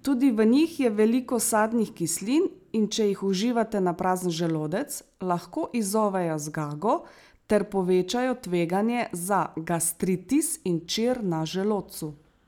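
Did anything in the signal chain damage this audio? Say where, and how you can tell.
No, no damage from any stage can be heard here.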